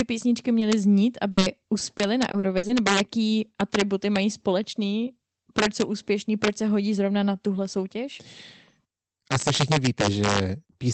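Integer overflow runs through the whole speech clip. The loudest peaks are pushed about 5 dB past full scale, and instead of being limited they wrap to the opposite sign. A small fraction of samples jump across the entire range, giving harsh, violent cracks on loud syllables. These are much sharper than the flattened, buzzy edge of ordinary clipping.

Short concealed packet loss appears at 0.59 to 0.63 s, where about 20 ms of audio never arrived. The receiver continued the preceding sound and then blended back into the real signal, leaving a brief smear or wobble.

A burst of packet loss follows at 1.31 to 1.39 s. About 60 ms went missing in one run, so the concealment holds the last sound as a buzz or hiss while turning it down. Speech then resumes further on, with that stretch skipped. This is longer than a single patched hole. A second short concealed loss at 1.39 to 1.43 s adds another 20 ms smear immediately after the burst.

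Repeated packet loss, heard as robotic sound, covers 1.79 to 2.71 s, just before "nebo jaký atributy mají". Six separate gaps of up to 60 ms each are patched one after another, so about a fifth of that span is synthetic. The result is choppy, with pieces missing, rather than a single dropout.

The Opus call path limits the audio to about 8 kHz, and its coding noise fits a bitrate around 20 kbps.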